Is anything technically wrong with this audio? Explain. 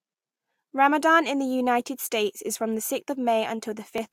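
No, nothing in this speech recording stood out as a technical problem on listening.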